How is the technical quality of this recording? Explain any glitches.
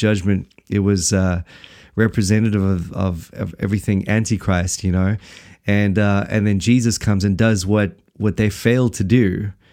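The recording has one audible glitch. At 2.46 s there is a sharp click, likely from dropped samples: a sliver under a millisecond vanishes, the waveform steps suddenly, and a thin vertical line crosses the spectrogram.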